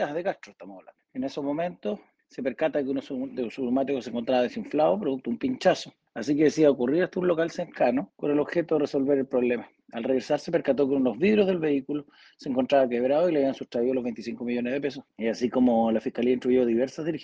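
No technical faults can be heard anywhere in this audio.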